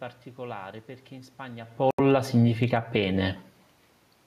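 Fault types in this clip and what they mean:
Automatic gain falling: the gain control judged the input too loud or its background noise too strong and eased down by about 4 dB. Speech and background sink together from 1.72 to 2.97 s.
Bluetooth stall: the sound cuts to silence for 79 ms at 1.91 s, then resumes. A headphone buffer running dry during interference is the likely cause.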